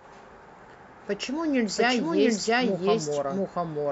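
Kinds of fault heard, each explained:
Doubled audio track: the whole speech clip carries a second, full-band copy of itself trailing the original by roughly 0.7 s, at about the same level, so every phrase is heard twice and the two overlap into a confused double layer. The copy is dry, with no decay or added room colour, which rules out a natural echo and points instead to the likely cause: a second, slower capture path or an edit leaving two copies out of step.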